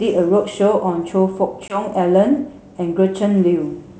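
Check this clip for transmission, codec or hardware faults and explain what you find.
One transmission fault stands out, while the G.722 wideband coding at 64 kbit/s carries the speech cleanly.

Packet loss on an ADPCM call, 1.68 to 1.81 s: a 20 ms silent hole, fitting a single lost packet, leaves the decoder's predictor and step size out of step with the sender's. Speech resumes disturbed, then settles. On a spectrogram this shows as a hard-edged blank column followed by a briefly smeared onset.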